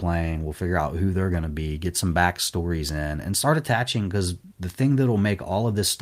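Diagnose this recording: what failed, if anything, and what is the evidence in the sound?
Nothing in this speech recording points to a failure at any stage, so there's no fault to diagnose here.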